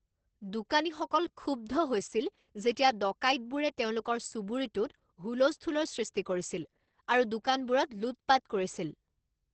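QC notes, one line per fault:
Throughout: Opus voice compression, heavy. Nothing comes through above about 8.3 kHz, so the speech sounds muffled. The coarse excitation coding at a low rate, which fits roughly 10 kbps in SILK wideband mode, leaves it hoarse and faintly robotic.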